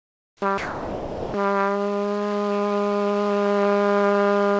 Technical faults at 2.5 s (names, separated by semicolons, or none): none